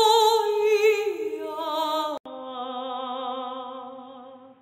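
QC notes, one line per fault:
2.18–4.62 s input switched to a poorer device: after an 80 ms gap, sound turns dull with nothing above 3.8 kHz, about 5 dB quieter, new faint noise floor; likely another microphone or a headset's call profile.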